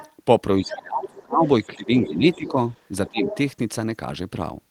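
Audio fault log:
0.0–0.13 s, 0.69–0.74 s, 1.46–1.66 s, 2.31–2.51 s, 3.07–3.35 s, other side's voice leaking through: the echo canceller likely failed to remove all of the far-end sound that the talker's loudspeaker fed back into the microphone, so a second voice surfaces in short scraps. It sits roughly 25 dB below the talker at the start, at 1.46 s and nearly as low at 2.31 s, but rises to about 15 dB below at 0.69 s and about 10 dB below at 3.07 s, where it is most audible.
0.6–1.45 s, 1.67–2.57 s, 3.1–3.21 s, speech suppressed in double talk: with both sides talking at once, the echo canceller likely could not tell the talker from the loudspeaker echo and attenuated everything together. The talker's level dips while the far end is active, by as much as about 25 dB in the first stretch, about 10 dB in the second and about 20 dB in the brief third.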